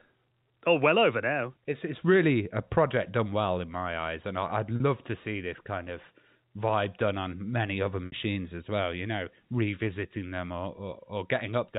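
At 4.76 to 4.80 s the speech briefly holds on a slightly buzzy, frozen tone, and again at 8.06 to 8.12 s, where the held tone fades into silence before the speech returns. This is packet loss with pitch repetition: 40 ms and then 60 ms of audio went missing, which fits two and three 20 ms packets, and the receiver filled each gap by repeating the last pitch period.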